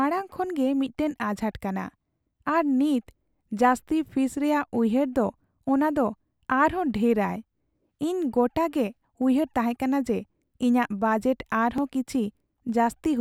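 Speech, with a single jump at 11.78 s where the sound skips ahead by about 1.5 ms, likely a dropped buffer (overrun) discarding unread samples.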